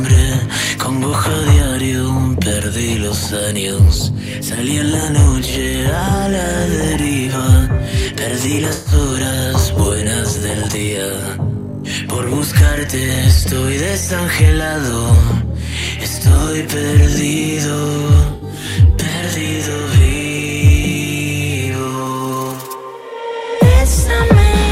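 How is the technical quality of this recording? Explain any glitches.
Two brief dropouts mar the recording. Both are AAC frame loss with concealment. The first runs from 8.73 to 8.94 s, covering about 128 ms of lost audio. The second runs from 18.35 to 18.43 s, about 64 ms. In each, coded frames failed to arrive. The decoder filled the gap by reusing the last good spectrum with altered phase or smoothed energy. The result is a short smeared, noisy, phasey patch where the real signal should be.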